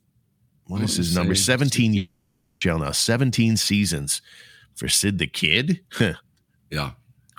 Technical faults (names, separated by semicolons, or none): long network dropout